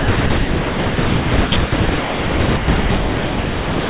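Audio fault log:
Throughout, sound chopped by the voice detector: about 2.6 s of the speech turns choppy with hiss, likely comfort noise filling stretches the detector stopped sending.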